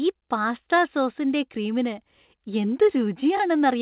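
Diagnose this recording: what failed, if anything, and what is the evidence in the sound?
Nothing has failed here, as far as I can hear: the speech has simply come through an ordinary call path, and the missing top end above 4 kHz is just the narrowband ceiling you'd expect from a telephone-grade codec like G.711.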